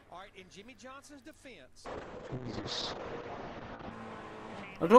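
From 1.86 s to 3.97 s there is a call bitrate drop. The connection's bandwidth estimate collapsed and the encoder was throttled hard, with the sound pointing to a fall from around 128 kbps to about 7 kbps, held at the bottom for roughly 2 s. The coder quantises far more coarsely and narrows the audio band from 20 kHz to 8 kHz, so the top end vanishes and the sound turns muffled and grainy until the rate recovers.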